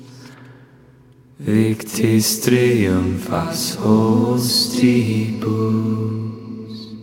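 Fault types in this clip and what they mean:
No audible faults detected.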